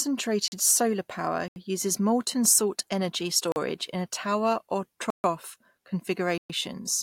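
Blocks of digital silence occur at 0.48, 1.48, 3.52, 5.10 and 6.38 s, lasting 40, 80, 40, 140 and 120 ms. Each time, the sound cuts out and returns with no fade. The 40 ms gaps and the longer ones, including the one after "in a tower or", sound like holes.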